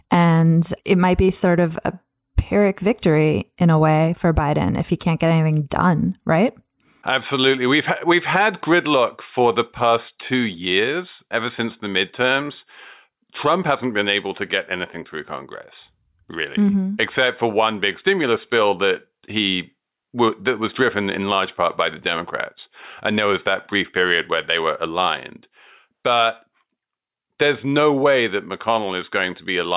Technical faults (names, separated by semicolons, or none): none